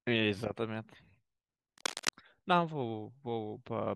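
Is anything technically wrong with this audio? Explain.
Yes, there's one problem. From 1.78 to 2.09 s, cable scratch noise rides over the speech for about 0.3 s: a dense, ragged crackle sitting only a little below the voice. It's likely a worn cable or connector being shifted, its contact resistance jumping around rapidly.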